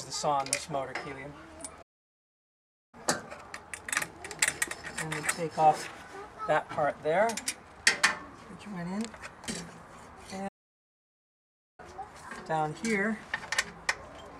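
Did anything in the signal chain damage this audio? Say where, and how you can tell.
Yes. Two playback stalls cut the sound mid-flow, from 1.82 to 2.95 s and from 10.48 to 11.80 s, gaps of 1.1 and 1.3 s. The waveform goes flat and the spectrogram shows a blank full-band column. The likely cause is the player running dry or its thread blocking.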